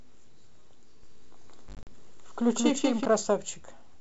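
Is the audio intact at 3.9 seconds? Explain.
Yes, at 3.9 seconds the speech is intact, carried through G.722 wideband telephone coding at 64 kbit/s with no fault at that moment.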